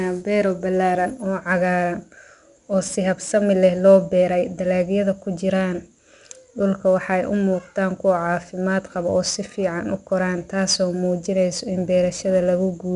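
From start to finish the speech carries 4-bit ADPCM compression, plainly audible as a gritty hiss riding on every loud syllable and roughening sharp onsets. Unlike fixed quantisation noise, the grit swells and fades with the signal. Nothing sounds above 10.6 kHz, pointing to roughly 88 kbps.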